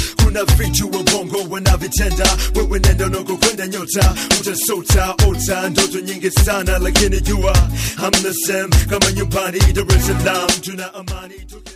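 Right at the end, from 10.42 to 11.76 s, there's zipper noise: the level drops by something like 25 dB in 2 dB jumps, around ten a second, each one clicking, so you hear a fast ticking ride down with the fade.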